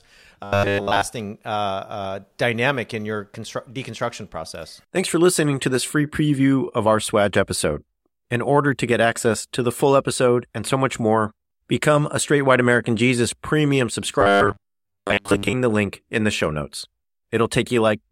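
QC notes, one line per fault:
0.44–1.02 s and 14.21–15.53 s, robotic sound from repeated short buffers: both stretches turn the speech into a rigid, metallic buzz pitched at 100 Hz that only loosely follows the words. This is likely from audio arriving too seldom, with the same tiny chunk, which fits a buffer of about 10 ms, replayed to fill the gap. The first stretch is repeated almost entirely. The second, ending just before "the link in the", is mostly repeated.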